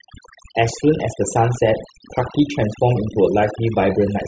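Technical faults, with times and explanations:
Throughout: overdone noise removal. The background drops and breaks up into twinkling specks, because an aggressive noise reducer cut frequency bands resembling noise and removed quieter voice detail with them.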